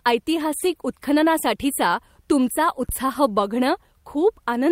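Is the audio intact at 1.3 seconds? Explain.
Yes, the speech at 1.3 seconds is intact, with no dropout, click, distortion or other fault audible at that point.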